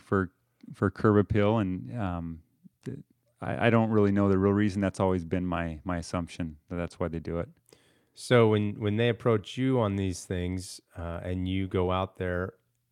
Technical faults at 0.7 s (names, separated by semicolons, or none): none